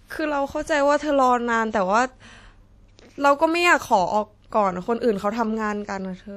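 Throughout the speech there is a ringing, washy smear, with hiss that swells and fades along with the signal and nothing above 15.1 kHz. This is likely WMA compression, its long transform blocks spreading quantisation noise, at a rate that fits roughly 48 kbps.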